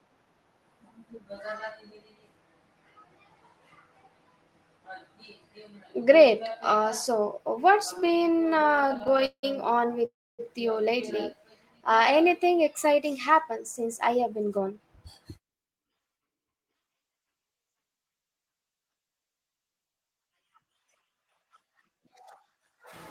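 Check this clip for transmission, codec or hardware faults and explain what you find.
Four network-timing faults appear in the speech, all between about 8 and 17 seconds.

From 7.93 to 9.45 s, right after "so what's", there are repeated stalls (stutter). Packets kept arriving late, and the receiver stretched the last sound to fill 31 gaps, the longest 179 ms, so about a third of the span is fill. On a waveform the speech is chopped by smeared, flattened stretches. A spectrogram shows smeared, held harmonics repeating between the real syllables.

From 10.05 to 10.41 s, just before "you lately", a call audio freeze holds the sound. The receiver first extends the last sound, then the final 270 ms or so goes silent before speech resumes, which adds 335 ms of delay. A likely cause is packets stuck in transit that emptied the jitter buffer. The waveform shows a fading tail into a flat gap, and the spectrogram shows a blank band.

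From 11.41 to 12.28 s, between "you lately" and "exciting happened since", a jitter buffer slow-down stretches the speech to 92% speed. The receiver repeated single pitch periods to add 71 ms of reserve, so the same pitch is drawn out. On a spectrogram the harmonics stay level while syllables widen slightly.

From 14.07 to 16.94 s, a jitter buffer speed-up runs the speech at 110% by cutting short pitch-period slices, about a third of a second in all, to shed excess delay. The speech sounds hurried with unchanged pitch. On a spectrogram the syllables are compressed in time while the harmonic spacing stays the same.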